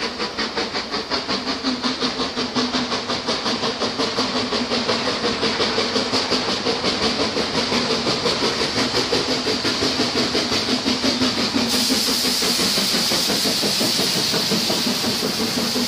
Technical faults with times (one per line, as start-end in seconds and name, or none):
none